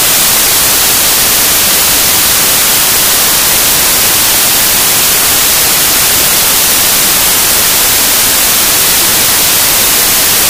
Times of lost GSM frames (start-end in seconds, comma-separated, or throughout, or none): none